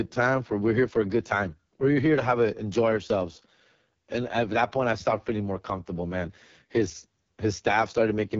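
Across the whole clip, the speech carries heavy AMR wideband (HD Voice) codec damage. The sound is rough and raspy, which fits the codec's lowest 6.6 kbit/s mode. The pulse-driven model cannot track the voice closely at this rate. Nothing sits above 7.5 kHz.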